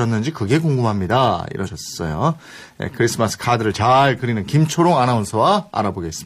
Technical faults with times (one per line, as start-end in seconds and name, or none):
1.63-1.69 compressed frames skipped